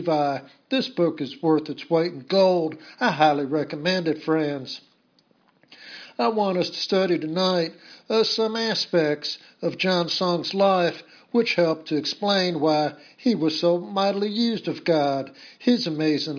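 No technical faults can be heard anywhere in this audio. Nothing in the sound points to a problem in how it was recorded, processed or delivered.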